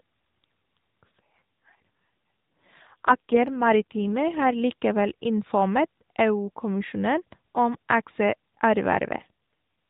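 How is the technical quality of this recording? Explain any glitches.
The recording is narrowband mobile speech with two AMR rate drops. The first runs from 1.06 to 4.60 s and the second, brief one from 9.16 to 9.31 s. Both times the network switched the AMR codec to a lower rate to protect against a weak radio link, which fits a drop from 12.2 to 5.9 kbps. The band stays the same and nothing drops out, but the voice turns buzzier and more synthetic until the rate recovers, leaving only the light damage of the AMR-NB codec.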